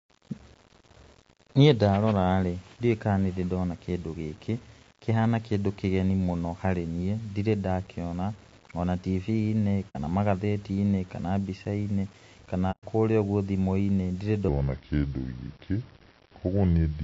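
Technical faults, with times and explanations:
throughout, low bit depth without dither: Quiet stretches of the speech turn gritty and grainy, and the faintest tails sputter or drop out between steps instead of fading smoothly. The graininess moves with the voice rather than sitting under it as steady hiss, at a level of roughly 30 dB below the speech. This points to samples that were likely rounded to about 8 bits with no dither, so the rounding error tracks the signal and becomes distortion rather than noise.
throughout, low-delay AAC compression: The voice sounds rough and synthetic, with a hazy noise filling the gaps between its harmonics and a top end that sounds thin and artificial. The damage is plainly audible. This matches AAC-ELD, the low-delay AAC used for calls, likely running at around 32 kbps. Its very short frames blur the pitch harmonics and eat bits, so at this rate the codec cannot keep the voice clean.
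9.89–9.96 s and 12.71–12.84 s, AAC frame loss with muting: The sound fades briefly into a soft-edged hole and fades back without a click. The first gap lasts about 60 ms and the second about 120 ms, ending just before "kũrĩa ũguo". Lost codec frames were replaced with silence by the decoder. The overlapping transform windows taper the sound out and in, which is why the edges are smooth. The gap lengths fit two and four lost frames.
14.48–17.03 s, section at the wrong speed: From 14.48 s to the end, the speech suddenly turns slow and deep. It plays at about 0.76 times its proper speed and drops roughly five semitones in pitch. Speed and pitch shift together at one instant, so the voice sounds sluggish and lowered rather than merely retuned. The likely cause is that this last stretch was played back against the wrong clock.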